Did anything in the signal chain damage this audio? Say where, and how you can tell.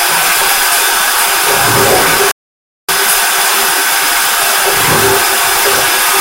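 Yes. A harsh, gritty fuzz sits on every loud moment from start to finish, with the louder parts of the sound taking on a brittle, crackling edge. This is hard clipping at a gain or conversion stage: the signal is driven about 10 dB beyond what the converter or sample format can carry, so a small share of samples, the peaks, are sliced off flat. Those squared-off tops generate high harmonics that were never in the original, which is the fuzz you hear.

At 2.31 s the audio cuts out abruptly and stays silent until 2.89 s, a gap of about 571 ms, before picking up again. This is a playback stall. The abrupt mid-flow dropout to silence, lasting over half a second, points to the playback stage rather than the recording. The player most likely ran short of buffered data or had its output thread blocked, leaving nothing to send to the output until it recovered.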